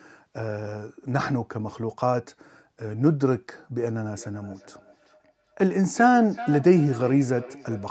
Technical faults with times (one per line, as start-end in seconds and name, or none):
4.18-7.91 feedback echo between two devices